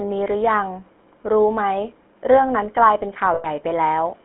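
From the start, the speech carries the sound of the GSM full-rate codec. It models the vocal tract and excites it with a sparse train of regular pulses. Much of the fine detail is thrown away. The result is a buzzy, gravelly roughness that is plainly audible. The band is narrow, roughly 200 Hz to 3.4 kHz, like a phone line. The coarseness fits a codec running near 13 kbps.

From 3.34 to 3.46 s, there are lost GSM frames. The decoder did not discard the gap. It reused the settings of the last good frame and repeated them. The sound turns into a rough, metallic ring for about a tenth of a second. That span fits roughly five lost 20 ms frames. The gap is too short for the ring to fade fully to silence before normal decoding resumes.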